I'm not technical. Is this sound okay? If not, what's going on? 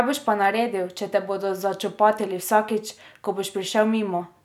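Yes, this recording sounds okay, with nothing wrong.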